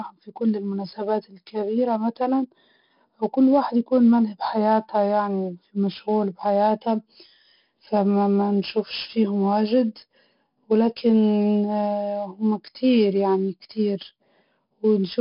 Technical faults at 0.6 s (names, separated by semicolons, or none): 4-bit ADPCM compression